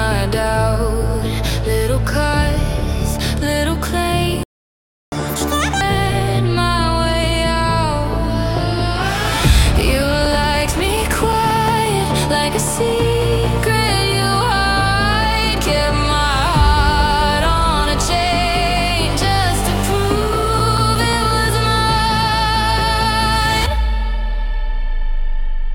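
At 4.43 s the sound cuts out completely, most likely because the player ran out of buffered data or its output thread was blocked. That is a playback stall. Nothing reaches the output for about 0.69 s, until 5.12 s, and the silence breaks into the audio mid-flow rather than at a natural pause.

The player then works off its backlog with a catch-up at higher speed. From 5.12 s to 5.81 s it resamples the held-back audio to run at 2.0 times normal speed. Because resampling changes speed and pitch together, everything in that stretch sounds hurried and shifted up by roughly ten semitones. At 5.81 s the lost time has been recovered, and playback drops back to its proper rate and pitch.

Between 9.90 s and 12.04 s, CD scratch ticks appear. A blemish on the disc is ruining more data on each turn than the error correction can rebuild, so the player has to interpolate or mute the damaged samples. 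The result is 13 short ticks, roughly six a second, each only a few milliseconds long, and their regular spacing follows the rotation of the disc. A second run of CD scratch ticks from 20.06 s to 21.31 s has the same cause. It gives 8 ticks at a similar rate, again no more than a few milliseconds each.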